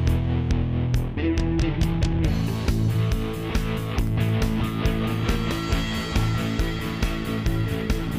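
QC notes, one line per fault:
3.64–5.16 s: CD scratch ticks. Eight tiny clicks, about five per second, none longer than a millisecond. On each disc revolution the scratch exceeds error correction, so samples are patched or muted.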